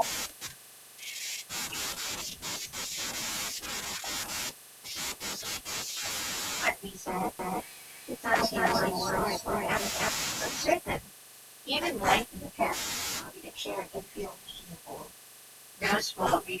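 From 7.39 s to 10.73 s the speech is heard twice. A second copy of the sound trails the first by roughly a third of a second, at about the same loudness. It is a doubled audio track. The copy carries the full frequency range. It has no decay and no room colour, so it is not an echo. It starts and stops abruptly. The likely cause is a second capture path running late, or an edit leaving two copies out of step.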